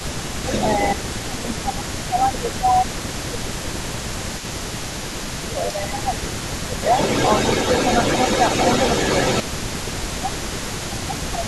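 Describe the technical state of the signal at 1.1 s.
At 1.1 s two faults overlap. An echo leak runs through the whole clip. A delayed copy of the speech returns about 276 ms late, only slightly quieter than the original. The likely cause is a far-end loudspeaker whose echo canceller let the pickup through.

Speech is also suppressed in double talk from 0.95 to 2.85 s. The voice dips in pieces, dropping by roughly 15 dB at its deepest, for about one and a half seconds in total. This likely comes from the canceller turning down both talkers when they overlapped.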